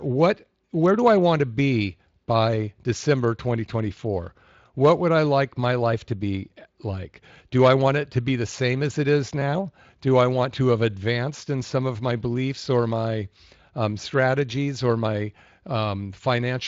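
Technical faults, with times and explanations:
No technical faults can be heard in this speech clip. It has passed through the Speex codec at a fairly high quality setting, which leaves only a light coding texture on the speech.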